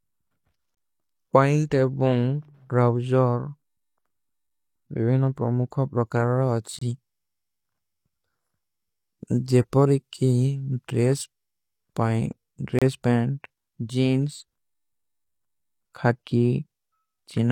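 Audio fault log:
0.75–0.77 s, 6.79–6.82 s, 12.79–12.82 s: gap between stream segments. The speech drops into hard-edged silence for 24 to 28 ms, recurring every 6 s at segment boundaries, where mismatched timestamps leave a hole the player pads with silence; the clip runs slightly longer, with no audio lost.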